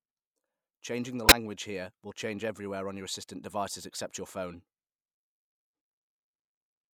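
At 1.25 to 1.32 s, just before "here will change everywhere", a short, fairly loud glitch cuts in: a corrupt frame decoded, where damaged bits in a few compressed frames misplaced energy across frequencies.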